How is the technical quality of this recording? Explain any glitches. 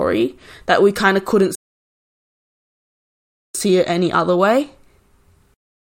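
One glitch affects the technical quality of the speech: a rebuffering stall from 1.55 s to 3.55 s. The player ran out of downloaded audio and waited for more, inserting about 2 s of silence. Unlike a dropout, where a chunk of sound goes missing, the speech resumes exactly where it stopped, so nothing is lost and only time is added.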